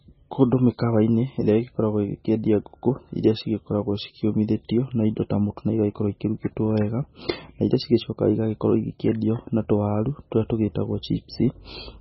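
From start to finish the speech has a hard ceiling at 5.6 kHz, with nothing at all above it, and it sounds heavily mangled: watery and swirly, with the s sounds going chirpy and metallic and the consonant attacks smeared. That's likely MP3 compression starved of bits, which fits a very low rate around 16 kbps. The encoder chopped off the treble and kept dropping weak frequency lines in and out between frames.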